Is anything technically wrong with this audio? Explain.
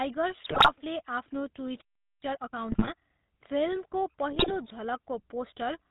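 Yes. The whole clip has GSM full-rate codec coloration: nothing above 4 kHz, and a buzzy, gravelly roughness from the regular-pulse excitation that keeps only a third of the excitation samples. It points to the 13 kbps GSM full-rate coder. Its evenness throughout separates it from transient damage.

Short bursts of GSM bit errors occur at 0.44–0.73 s, 2.72–2.89 s and 4.32–4.56 s. Corrupted filter, pitch and gain values warp the spectrum and spike the level, giving squawks, pops and gargling. Unlike packet loss, there are no gaps or muted stretches.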